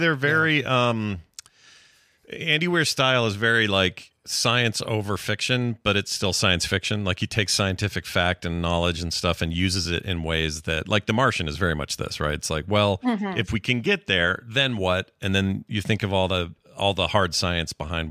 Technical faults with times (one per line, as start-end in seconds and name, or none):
none